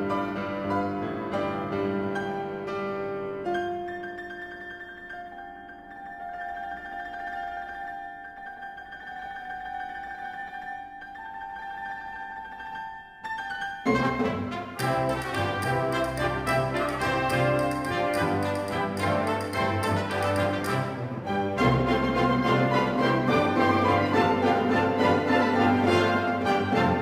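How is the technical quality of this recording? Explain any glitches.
No technical glitches can be heard in this recording. Nothing in the audio calls for further explanation.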